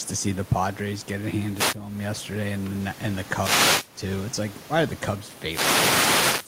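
Gain pumping runs throughout the speech: the gain swings roughly 15 dB, with the room noise about 40 dB below the speech, likely from excessive input gain hitting a fast limiter.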